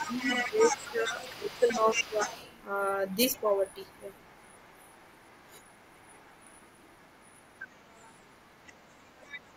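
A speech recording whose opening seconds show speech suppressed in double talk. From 0.00 to 2.19 s the talker's level dips by around 15 dB, about a second of it in total, likely because an echo canceller turned down both directions while two people spoke at once. Unlike a noise gate or network dropout, the dips come only while a second voice overlaps and are not simply silence. That second voice is the other side's voice leaking through, heard from 0.00 to 2.63 s roughly 10 dB below the talker, then much fainter, some 30 dB down, from 3.33 to 9.44 s. It is a different person's speech that the echo canceller likely failed to remove from the loudspeaker pickup, not a delayed copy of the talker as with room reverberation or a plain echo. At 9.49 s, through to the end, the talker drops again by around 30 dB for a brief moment, another double-talk cut.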